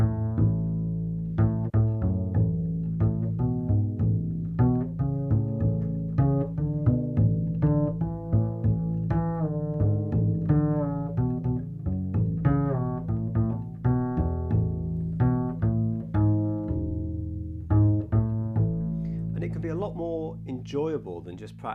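Nothing stood out as a technical problem on listening.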